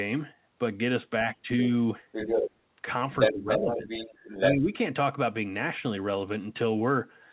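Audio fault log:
1.24–1.48 s, 3.27–3.86 s, 4.51–4.72 s: speech suppressed in double talk. The talker's level sinks by a modest amount in the first stretch and by a deeper margin, around 10 dB, in the later two, with the 3.27 s dip the longest. This is likely an echo canceller turning everything down while both sides spoke at once. On a waveform the envelope is pinched flat. A spectrogram shows the harmonics fading in short bands, against a band limit at 4 kHz.
2.12–2.51 s, 3.19–3.33 s, 3.51–4.53 s: other side's voice leaking through. A second voice sits on the microphone signal at roughly the talker's own level. Around 3.2 s it is somewhat louder, and from 3.51 s it runs for about a second. This is likely loudspeaker playback the echo canceller failed to remove. A spectrogram shows a second, independent harmonic stack interleaved with the talker's. On the waveform, the leaked energy overlaps the 3.27 s and 4.51 s dips.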